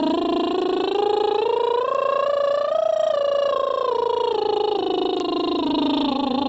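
Throughout the music, gain pumping is audible: the level breathes, with a swing of roughly 15 dB. The likely cause is gain set far too high, so a fast limiter clamps down on every peak. On the waveform, the envelope looks flattened and squashed.

At 1.95 s and again at 5.20 s, a bit error spike cuts through as a single sharp tick unrelated to the music. A flipped bit made one sample jump by a power of two and snap back. Each shows as a lone vertical line on the waveform and a thin full-band streak on the spectrogram.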